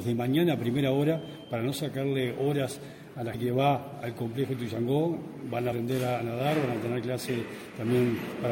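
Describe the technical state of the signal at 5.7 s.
At 5.71 s, a few whole compressed frames never reach the output, either missing from the stream or rejected by the decoder as damaged. With frames of 26.1 ms, about 70 ms of audio is skipped, so the sound lurches forward. The surviving neighbours overlap and blend across the gap, so this compressed-frames-skipped fault is heard as a short smeared blip and a small jump in continuity, not a sharp click.

Underneath, and through this moment as well, faint detail flickers in and out, giving a watery, swirling texture with softened attacks. The likely cause is MP3 compression with too few bits, damage plain enough to fit a rate near 64 kbps, where the encoder drops weak frequency content that it judges inaudible.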